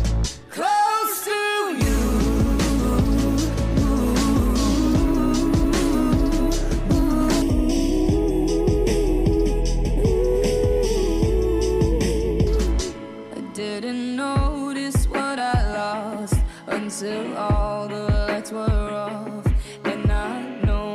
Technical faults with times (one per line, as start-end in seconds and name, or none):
7.42-12.47 channel delay (comb filtering)